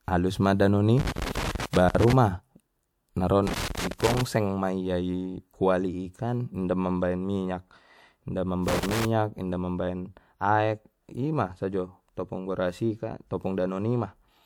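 A worn or dirty contact somewhere in the cable path keeps making and breaking, chopping the speech signal into bursts of loose connector crackle: irregular scratching from 0.98 to 2.13 s, 3.47 to 4.21 s (just before "ma ia ikuali"), and 8.68 to 9.05 s.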